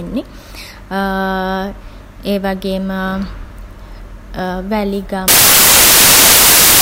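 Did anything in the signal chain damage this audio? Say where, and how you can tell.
Yes. The damage sits at the sample-format conversion stage: from 5.28 s to the end of the clip at 6.81 s, the samples are built from the wrong bytes. The reader assembles each sample misaligned or with its byte order swapped, so the rapidly changing low-order bits end up as the most significant part of every value. The speech is abruptly replaced by loud, hiss-like noise, close to white on the louder sounds.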